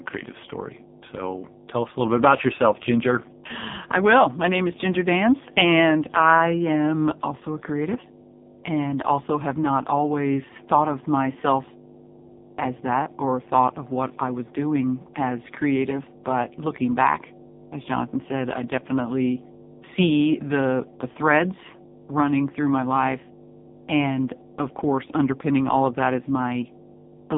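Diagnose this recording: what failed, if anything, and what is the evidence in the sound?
Mains hum has got into the analogue wiring ahead of the converter. A steady 50 Hz tone with low harmonics runs under the speech for the whole clip, roughly 15 dB below it, and does not follow the talker's level. A ground loop or a nearby transformer is coupling the power line into the signal path. The fixed 50 Hz pitch and the harmonic series tell it apart from rumble or handling noise, which wander and have no fixed pitch.

The speech has passed through the AMR narrowband mobile codec, a codec stage, and the damage is heavy throughout. The band sits between about 150 Hz and 3.7 kHz, with nothing above 3.7 kHz. The voice sounds buzzy and synthetic, which fits a low AMR-NB mode at around 5 kbps. Here the vocal-tract model is fed too few pulses to rebuild the voice. Plain band-limiting would only muffle the sound, without this synthetic buzz.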